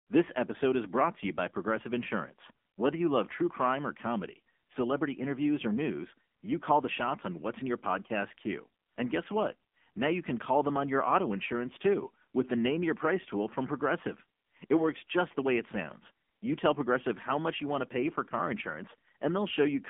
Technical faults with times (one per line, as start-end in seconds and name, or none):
0.00-19.90 AMR narrowband mobile codec